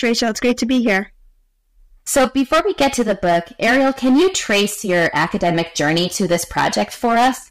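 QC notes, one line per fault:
Throughout, hard clipping: the speech is driven about 14 dB past what the signal path can pass, so around 7 percent of samples were cut flat at the clipping limit. The waveform shows flat-topped peaks, and the spectrogram shows harmonic smearing up to the top band, heard as harsh fuzz on every loud syllable.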